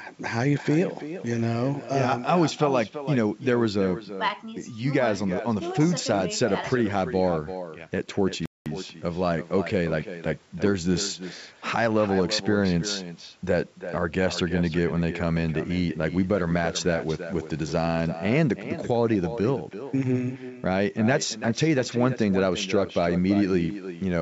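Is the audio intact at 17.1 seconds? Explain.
No. At 17.1 s, as throughout the clip, there is echo with no canceller: the far end's loudspeaker output re-enters its microphone uncancelled, so the speech returns about a third of a second later, about 12 dB quieter and thinner. A spectrogram shows a faint, delayed duplicate of each syllable.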